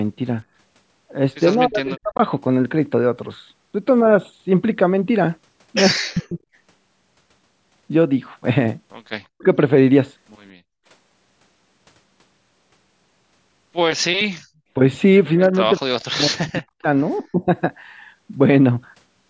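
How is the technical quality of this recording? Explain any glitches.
The recording carries clear echo-canceller trouble: the speech is repeatedly pulled down while the far side talks, a faint echo slips through once, and the room sound is gated twice. The audio runs through call microphone processing, with nothing above 8 kHz.

Speech suppressed in double talk occurs at 1.56–2.19 s, 6.03–6.39 s, 9.33–9.46 s, 15.38–16.87 s and 17.2–17.48 s. With both ends talking at once, the canceller likely couldn't tell the local talker from its loudspeaker echo and turned everything down. The speech sinks by roughly 35 to 40 dB in most of these, for about half a second around 1.9 s and about a full second across the 15.4–16.9 s stretch. The last dip is shallower, around 20 dB.

The echo leak comes at 1.88–1.97 s, inside the first suppression. The far end's canceller probably failed to remove all of what its microphone picked up from its loudspeaker. 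A brief scrap of the voice comes back about 197 ms late, roughly 30 dB below the speech, heard as a faint repeat under the dip.

Background gated by the echo canceller appears at 10.52–10.86 s and 14.4–14.53 s. While the loudspeaker was active, the canceller clamped the microphone hard, so the room tone drops by about 40 dB for a fifth of a second or less. It then returns as the canceller releases, leaving a short hole in the ambience.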